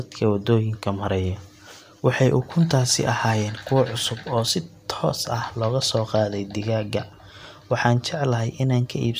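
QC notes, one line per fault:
No technical faults are audible in this speech recording, and the signal holds steady from the first moment to the last.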